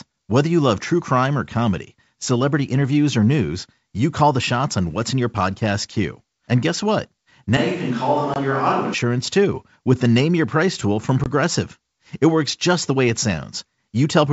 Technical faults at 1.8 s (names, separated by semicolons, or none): none